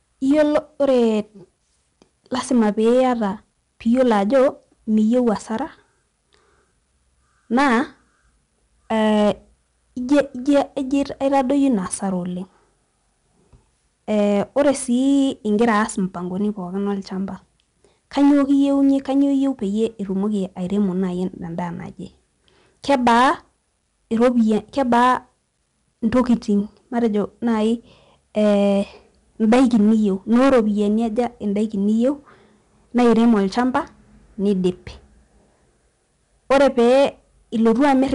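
From start to end, the speech carries 4-bit ADPCM compression. Each sample is a coarse step from a prediction. This leaves a gritty hiss on loud syllables. Sharp onsets distort as the step lags. Nothing sounds above 10.6 kHz, which fits about 88 kbps.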